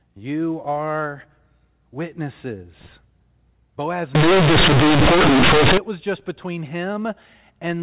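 From 4.15 to 5.78 s the speech hits a fault of companded audio read as linear: mu-law telephone bytes are played out as plain linear 8-bit samples without being expanded. Every sign change then throws the waveform across roughly half its range, so quiet stretches come out as loud as peaks and the shape is badly bent. The result is a harsh, very loud buzzing distortion with heavy noise through the gaps, clearing just before "was just between". Around it, the audio carries the narrow, sub-4 kHz sound of G.711 telephone coding.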